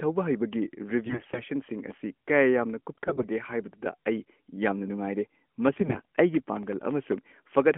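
Speech carried over a narrowband AMR-NB mobile link, band-limited to roughly 200 Hz–3.4 kHz with only light codec colouring, consistent with the 12.2 kbps mode. Three stretches turn hoarse, scratchy and gargly while keeping pitch and level, at 1.06–1.42 s, 2.92–3.27 s and 5.72–6.05 s. These are AMR bit errors: flipped low-priority bits in around seventeen frames per stretch, at a bit error rate of roughly 7 to 10 percent, misplace excitation pulses and skew gain and spectral detail. From 6.57 to 7.18 s a gritty burst of crackle rides on the sound. This is processor overload crackle, with around ten sub-millisecond buffers missing their deadlines and each leaving a hard-edged silent gap.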